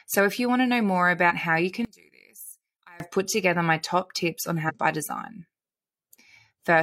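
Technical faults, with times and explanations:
1.85–3.00 s, one channel inverted: likely one stereo channel had its polarity reversed, so the centred voice cancels when the channels are summed to mono. From just after "how you" until "put together my top" the speech drops by about 22 dB and is left as a faint copy.
4.65–4.71 s, damaged data in a compressed stream: a short stretch of the encoded stream was corrupted, so the decoder misread those frames and lost sync while searching for the next valid header. Between "my top tips on" and "by design" this is heard as a brief glitch.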